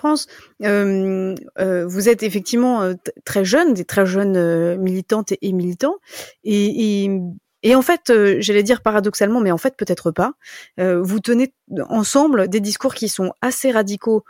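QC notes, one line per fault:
No faults found.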